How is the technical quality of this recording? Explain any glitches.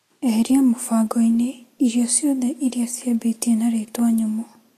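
The technical quality is compromised by audible lossy-codec damage across the whole speech clip. The damage is plainly audible from start to finish. Nothing reaches above 14.2 kHz. The treble that remains sounds hissy and grainy. Consonant attacks are blurred, and tonal parts of the sound have a rough edge. The likely cause is Vorbis compression at a low setting, which fits a bitrate around 35 kbps. The encoder keeps a smooth spectral outline but quantises the upper detail coarsely. That detail is replaced by noise of similar energy, which creates the grain.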